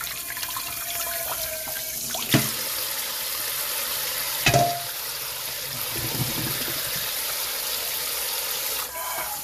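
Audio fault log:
throughout, transcoding between lossy codecs: nothing above 15.2 kHz and two kinds of codec smear stacked together, likely a low-rate MP3 re-encoded as Vorbis.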